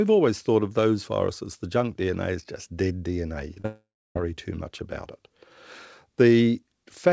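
At 3.54–3.58 s and again at 3.60–3.66 s the sound briefly smears and wobbles, each time for a few hundredths of a second. This is short concealed packet loss: about 20 ms and then 40 ms of audio arrived too late, and the decoder bridged each gap by extending the preceding sound.

Straight after, from 3.66 s to 4.17 s, that extension carries on as a fading buzz or hiss and then drops to silence for about 0.3 s before the speech resumes. This points to a long network dropout, likely a half-second gap in delivery, and roughly 500 ms of the original audio is simply missing. Throughout, nothing is heard above 8 kHz, which fits a wideband call codec such as G.722.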